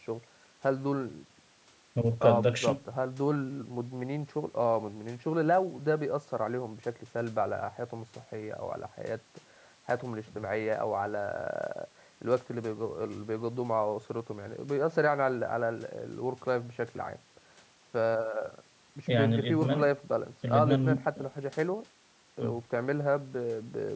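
No technical faults can be heard in this speech recording.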